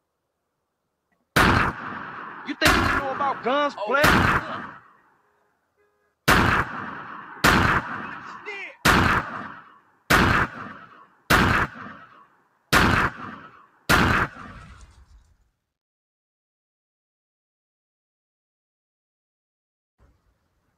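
A noise suppressor built for speech is applied to music or sounds throughout. It treats sustained and ambient material as noise and pulls it down, so the level swings by around 20 dB as the processing engages and releases. Onsets pass largely intact while held portions and decays sink, giving a pumping, fluttering quality and a thinned-out body between attacks.

Sound is cut by the noise suppressor in seven places: 4.71–6.14 s, 9.54–10.10 s, 10.49–11.30 s, 11.68–12.72 s, 13.33–13.89 s, 14.28–15.47 s, and 19.99 s to the end. The deepest drops reach about 21 dB, except at 14.28–15.47 s, where they reach about 18 dB. In each stretch the steady or fading material sinks or has its tail clipped short, and the sound audibly ducks.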